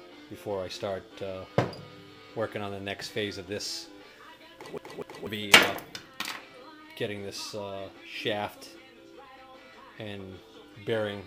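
From 4.78 to 5.27 s the audio catches in a CD stuck on one turn: a 245 ms fragment plays twice, each return marked by a brief mute. A scratch at one point on the disc sends the laser back a track on each turn, producing the even, rapid stutter of a skipping CD.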